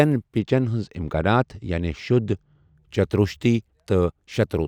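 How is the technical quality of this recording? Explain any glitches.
The recording has one fault, a channel delay causing comb filtering, from 0.39 s to 2.75 s. One channel runs late by a tiny amount, around two samples, or a few hundredths of a millisecond. When the channels sum to mono, cancellation produces a first notch near 10 kHz, so the speech loses top-end air and sounds dull.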